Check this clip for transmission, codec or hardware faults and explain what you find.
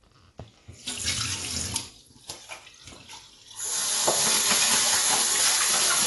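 One fault runs through the whole recording: AAC compression. A low-bitrate AAC-LC encoder, likely the cause, quantised the spectrum coarsely, which fits roughly 32 kbps. Nothing survives above 11.5 kHz, so the audio sounds dull, and the coding damage is plainly audible as smearing and a warbling, fizzy texture.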